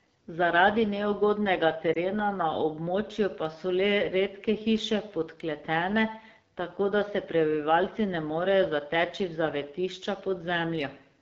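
Throughout the speech, the AMR wideband (HD Voice) codec is plainly audible. The rough, raspy texture points to one of its lowest modes, around 8.85 kbit/s. Unlike a simple low-pass, the band up to 7 kHz is kept, but the top is filled with shaped noise, and the pulse-driven model frays voiced sounds.

From 1.93 to 1.99 s, just before "na območju pa so", a lost AMR speech frame of about 20 ms causes a brief dip or warble. The decoder repeats the previous pitch and vocal tract settings at reduced gain. It is a smoothed, tonal blur rather than the hard click or gap of a dropout, and the voice comes back weak or rough for a moment.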